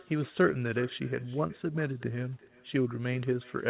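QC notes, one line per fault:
Throughout: echo with no canceller. Each phrase returns roughly 0.4 s later as a quieter, thinner copy, about 22 dB down, because a far-end loudspeaker feeds its microphone straight back. The spectrogram shows faint duplicate syllables shifted right, and the waveform shows small trailing bursts.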